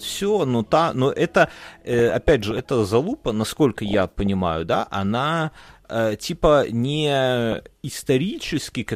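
Weak DAB reception lets bit errors slip past the error correction into the MP2 audio, at an error rate of a few tenths of a percent, corrupting sample values, which put short blips of noise in single sub-bands, and, where they get through, scale factors, so individual sub-bands jump in level for up to a frame. The result is DAB burbling over the speech from 1.93 to 2.59 s, 3.86 to 4.27 s and 7.52 to 8.07 s, the stretches pointing to runs of 32, 22 and 25 damaged frames.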